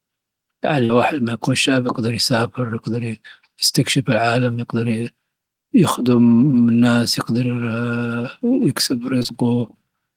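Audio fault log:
0.85–0.91 s: short concealed packet loss. About 40 ms of speech arrived too late to decode, just before "لما يكون شاب يقدر". The receiver continued the preceding sound to cover the gap, so a brief smear is heard.
6.51–6.55 s: short concealed packet loss. About 20 ms went missing and was patched over. The result is a small wobble.
9.19–9.34 s: short concealed packet loss, three losses of about 20 ms each in quick succession. Each gap was bridged from the last sound and then blended back, so this passage wobbles. Its timing stretches by a few milliseconds.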